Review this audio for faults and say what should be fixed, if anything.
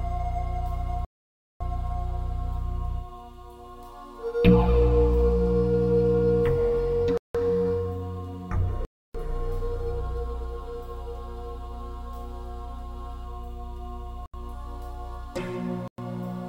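The sound drops to silence five times: 1.05 to 1.61 s (0.56 s), 7.18 to 7.35 s (0.17 s), 8.85 to 9.15 s (0.30 s), 14.26 to 14.34 s (0.08 s) and 15.88 to 15.98 s (0.11 s). Each gap starts and ends abruptly before the sound resumes. The likely cause is a Bluetooth stall. Radio interference delayed the packets, the headphones' buffer emptied, and playback halted until resent packets arrived. To prevent it, keep the phone close to the headphones and away from crowded 2.4 GHz sources, or use a wired connection.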